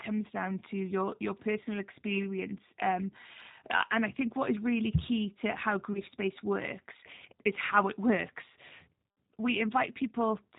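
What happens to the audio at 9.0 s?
At 9.02 to 9.04 s, just after "is how it works", there is VoIP packet loss concealed by the speech codec. About 20 ms of audio, which fits a single lost packet, never arrived. The decoder covered the gap by extending its last pitch and filter at falling gain, so the sound briefly smears into a buzzy tone or coloured noise that fades. The following sound returns weak or distorted before it recovers.

Underneath this, the audio passes through the G.729 codec at 8 kbit/s. It rebuilds sound from a vocal tract filter, a pitch predictor and a few pulses per frame, and passes nothing above 4 kHz. At this moment the result is plainly rough, dull and synthetic.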